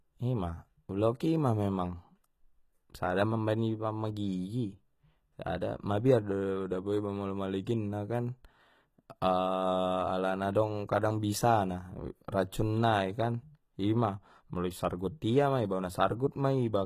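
HE-AAC compression runs throughout, likely from spectral band replication at a very low bitrate, around 20 kbps by the sound. The treble is rebuilt from copied lower bands rather than the original, so sibilants come out gritty and metallic, with nothing above 14.9 kHz.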